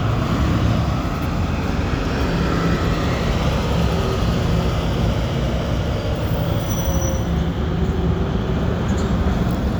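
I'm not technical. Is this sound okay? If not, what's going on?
Yes, this sound is okay, and nothing is going wrong with it.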